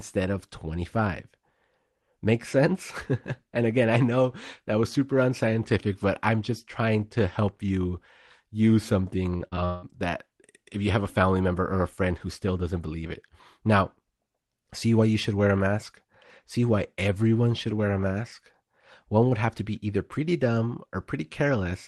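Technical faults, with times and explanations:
9.37–9.85 s, repeated packet loss (robotic sound): four gaps, the longest 179 ms, each patched by extending the last sound, so about half of it comes out choppy and robotic.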